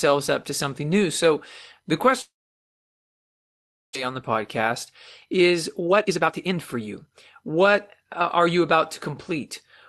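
A speech recording with two faults: from 2.21 to 3.97 s the sound fades into near-silence, a flat, empty waveform stretch before "on the", likely a long network dropout. From 5.30 to 9.11 s a jitter buffer speed-up trims pitch periods, so speech runs about 18% faster at the same pitch, with roughly 0.7 s squeezed out and compressed spectrogram timing.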